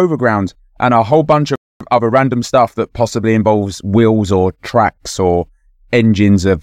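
At 1.56 s the speech cuts to silence for about 0.25 s, until 1.81 s, and then resumes. That points to a playback stall, most likely the player running short of data or its thread being held up.

From 1.81 s to 4.29 s a time-compressed catch-up follows. The player trims and cross-fades small slices to work off its backlog, so the speech runs about 1.1 times fast at unchanged pitch. A resampling speed-up would raise the pitch instead.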